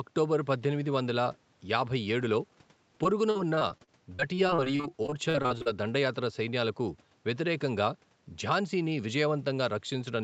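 From 3.03 to 5.68 s, the call's packets went missing or arrived late over and over, a pattern that points to some two dozen separate gaps. The receiver covered each hole by stretching the last bit of speech, about 0.55 s of the 0.6 s lost. The result is repeated packet loss with a robotic sound: choppy, robotic speech with small pieces missing. The longest gap is 43 ms, and concealment covers about a fifth of the stretch, heard against the call's 8 kHz band limit.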